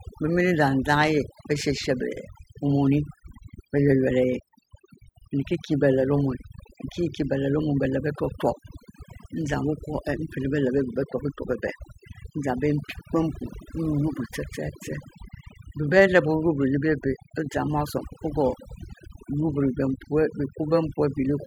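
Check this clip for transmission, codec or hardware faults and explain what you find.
One fault runs through the whole speech clip: overdone noise removal. A noise reduction stage set too aggressively cuts individual frequency bands whenever they sit near its noise estimate, taking quiet speech detail along with the noise. Pauses fall to near silence sprinkled with twinkling specks. On a spectrogram, the background shows as scattered isolated dots on a dark field, and the speech has ragged, holed edges.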